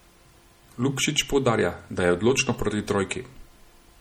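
MP3 compression throughout: watery, swirly speech with dulled treble, likely from a low-bitrate MP3 near 48 kbps discarding weak frequency lines frame by frame.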